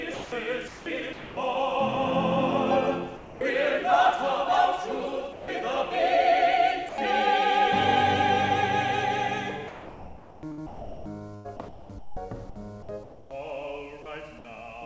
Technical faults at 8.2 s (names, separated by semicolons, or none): none